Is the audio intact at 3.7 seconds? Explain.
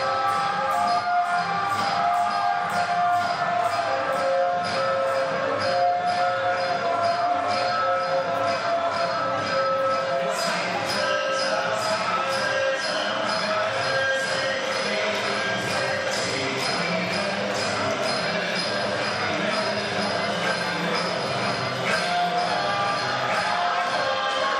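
No. A doubled audio track runs through the whole clip. A full-band copy trails about a second and a half behind, around 5 dB quieter, likely from a second, slower capture path. Unlike an echo, it doesn't decay and has no room colour.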